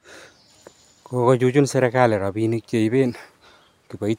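No technical faults are audible.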